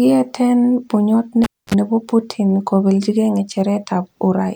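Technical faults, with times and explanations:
1.44–1.74 s: cable pulled and plugged in. A pop, about 256 ms of near silence, then 46 ms of 50 Hz mains buzz as the tip reconnects, and a second pop.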